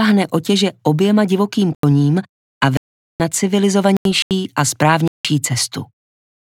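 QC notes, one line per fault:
1.74–1.92 s, 2.77–3.20 s, 3.97–4.31 s, 5.08–5.25 s: corrupt frame muted. Bit errors left several compressed frames undecodable, so the player replaced them with silence. Each gap cuts in abruptly and lasts 0.17 to 0.43 s, and the timing around it stays intact.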